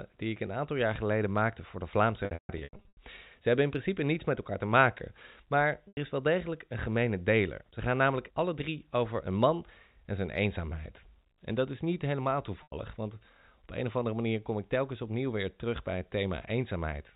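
Packet loss with pitch repetition breaks this telephone-band speech at 2.25 to 2.97 s (about 480 ms lost, with runs up to 150 ms) and at 5.88 to 5.97 s and 12.63 to 12.72 s (90 ms each), in steps that fit 30 ms packets. The receiver repeats the last pitch period and fades it over about 50 ms, so longer gaps drop to silence before a cross-fade, over otherwise normal G.711 coding.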